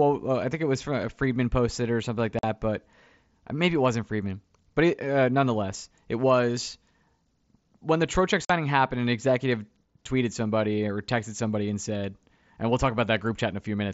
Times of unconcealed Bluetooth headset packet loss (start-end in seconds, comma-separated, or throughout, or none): 2.39-2.44, 8.45-8.50